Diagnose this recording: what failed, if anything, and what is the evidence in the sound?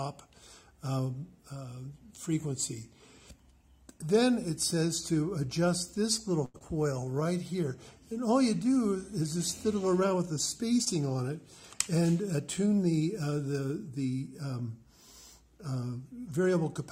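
The network path and receiver jitter buffer failed. A short stall from a late packet occurs at 6.45 to 6.56 s. The last sound is held for 88 ms, with a slight buzz or dip in level, and then continues from exactly where it stopped, so nothing is lost. A packet missed its playout time, the buffer drained, and the receiver extended the final frame until the packet arrived. This added 88 ms of delay.

Short concealed packet loss follows at 6.58 to 6.62 s and occurs again at 10.84 to 10.88 s. Each is a brief smear or wobble, and a short transient may be missing. In the first event about 60 ms of audio never reached the decoder, and only 23 ms of synthesised continuation covered the gap. The delay dropped by roughly 40 ms as a result. The second event lost 20 ms and filled 17 ms. The concealment extrapolates the previous pitch or shaped noise and then crossfades back into the decoded audio.

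A jitter buffer slow-down runs from 6.83 to 7.13 s. Over this stretch the audio plays at about 90% speed with unchanged pitch, so sounds are drawn out and there may be a faint warble. After the underrun and the loss just before it, the receiver rebuilt its reserve by repeating individual pitch periods or pause segments. This added 38 ms of buffered delay.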